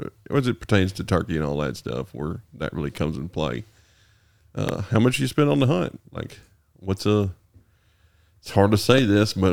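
A loud pop hits at 4.69–4.71 s, another at 8.98–9.00 s. Each sharp click stands roughly 10 dB above the speech. A likely cause is a voltage spike.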